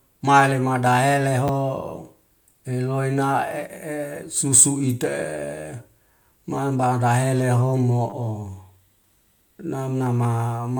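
Repeated buffer at 1.48 s and again from 8.10 to 8.12 s: fresh audio missed its deadline, so the device replayed its last block, which fits a 10 ms buffer. The speech catches in a brief click, once at 1.48 s and twice over, buzzing briefly, near 8.1 s.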